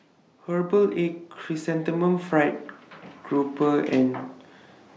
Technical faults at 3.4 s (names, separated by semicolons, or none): none